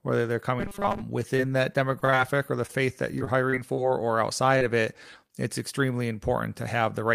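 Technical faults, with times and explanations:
0.60–1.02 s, robotic sound from repeated short buffers: Right after "whether they're", most of this span turns into a rigid, metallic 200 Hz buzz. The likely cause is a tiny slice, consistent with about 5 ms, being replayed while fresh audio is skipped. A spectrogram shows flat, evenly spaced harmonics at 200 Hz multiples, and the waveform shows identical repeating cycles.
1.19–2.14 s and 3.19–3.79 s, repeated packet loss (robotic sound): Choppy, robotic stretches full of small holes. The first ends just before "or the faith that". Each hole, up to 30 ms long, is patched by continuing the previous sound. About 144 ms is filled in the first stretch and 83 ms in the second, with 80 ms of real audio missing from each. Spectrograms show smeared, frozen harmonic blocks, and the waveform shows repeated-looking segments with abrupt joins.
2.66–2.71 s, short stall from a late packet: A sound is held about 26 ms too long while the jitter buffer waits, then playback resumes where it left off, with nothing lost. 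There is a faint buzz or dip. A spectrogram shows a briefly flattened, stretched frame, and the waveform shows a short run of repeating cycles.
4.58–4.63 s and 5.27–5.31 s, short concealed packet loss: Two brief smears or wobbles, the first just before "of it it's extremely". In each, about 20 ms of audio never arrived and roughly 25 ms of continued sound bridges the gap before blending back. These appear as a tiny blurred column in the spectrogram and a slight discontinuity in the waveform.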